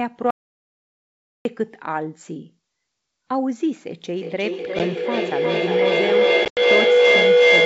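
From 0.31 to 1.45 s there is an audio dropout to silence. The input was likely lost, through a disconnected device, a failed link or a mute, while recording carried on writing silence. The sound stops abruptly and returns abruptly after about 1.15 s of silence with no room tone at all. Whatever speech fell in that gap is gone.

At 4.16 s a feedback howl begins and runs to the end of the clip. Two devices in the same room are on one call, so the microphone picks up its own loudspeaker output and each trip around the loop adds gain. The repeats grow instead of decaying and narrow onto a tone of around 500 Hz, with a loop delay of roughly 400 ms. At its loudest the howl stands about 9 dB above the speech.

Under the howl, the wideband G.722 telephone coding is heard, and two packet-loss events hit the ADPCM call. At 4.79 to 4.81 s about 10 ms of audio is missing, which points to a single lost packet. 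From 6.45 to 6.61 s about 100 ms is lost across a 120 ms stretch, with the longest unbroken run near 90 ms, which suggests around ten packets. Each hole is filled with silence and has hard edges. Because the decoder's predictor and step size no longer track the sender's, the speech returns slightly distorted, then settles within a few tens of milliseconds.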